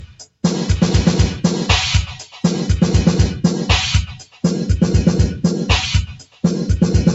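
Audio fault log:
Throughout: noise suppressor applied to music or sounds. A speech-oriented suppressor stayed active and treats steady tones and decays as noise, so held sound and tails are pulled down by about 10 dB while onsets pass, giving a pumping, thinned-out character.
0.0–0.44 s, 2.1–2.44 s, 4.06–4.43 s, 6.06–6.43 s: sound cut by the noise suppressor. In each window, roughly 300 to 400 ms long and recurring about every 2 s, the suppressor misclassifies the sound and clamps it, dropping by about 21, 12, 20 and 21 dB at the deepest, so the level sinks before recovering.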